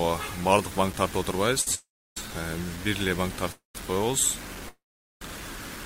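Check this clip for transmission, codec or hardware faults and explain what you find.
Several faults are present: grainy low-resolution quantisation throughout, plus a cluster of network playout problems.

Low bit depth without dither runs the whole way through. The grit tracks the level of the sound, with the noise only around 15 dB below the signal, which fits a likely truncation to about 6 bits with no dither. On a spectrogram it shows as a signal-dependent noise haze, and the waveform looks stepped.

A short stall from a late packet appears at 1.61 to 1.68 s. The last sound is held for 52 ms while the receiver waits, then resumes at the same point. It shows as a brief smeared, repeated stretch with a slight buzz or dip.

Call audio freezes occur at 1.75 to 2.29 s, 3.52 to 3.76 s and 4.69 to 5.22 s, likely from packets held up in transit while the jitter buffer ran empty. The last sound continues as a fading buzz or hiss before going quiet for about 320 ms, 150 ms and 440 ms respectively. 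In total 419 ms, 230 ms and 525 ms are inserted, with nothing lost. On a spectrogram these appear as blurred tails followed by blank gaps.

The jitter buffer slow-down runs from 3.86 to 4.11 s. Pitch periods are repeated to add 40 ms, so playback runs at about 87% speed with the pitch unchanged. The sound is drawn out, and the spectrogram shows stretched, periodically repeated patterns.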